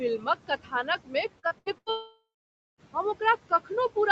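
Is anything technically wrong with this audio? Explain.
Yes. Throughout, the background sinks between phrases and rises beneath them. These are noise suppressor artifacts: the suppressor pulls steady-noise bands down by about 18 dB, frame by frame.

From 0.18 to 0.88 s, at 1.04 to 1.14 s, and from 3.49 to 3.71 s, parts of the speech sound swallowed and faint. Each is speech cut by the noise suppressor, which treated quiet speech as noise and lowered it by about 16 to 18 dB.

From 1.39 to 1.89 s the sound turns choppy and robotic, with four short holes, the longest 84 ms. This is repeated packet loss (robotic sound): lost packets were patched by extending the previous sound, covering roughly half that stretch.

From 1.90 to 2.81 s the audio becomes a fading buzz or hiss, then about 0.54 s of silence, and resumes with that portion missing. This is likely a long network dropout, with the receiver stretching the last sound before giving up.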